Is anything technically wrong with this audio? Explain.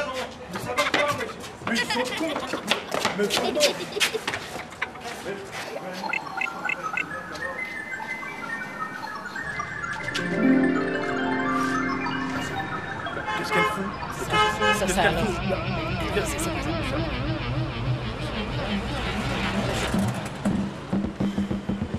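No, nothing is technically wrong with this audio.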